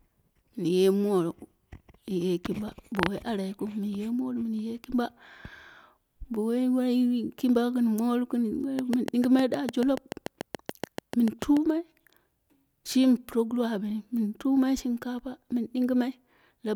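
From 8.79 s to 11.58 s, a train of clicks sits over the speech. About twenty similar pulses arrive at a steady 6.8 per second, well above the speech level. They sound like sharp, even ticking. Interference from nearby equipment is the likely cause.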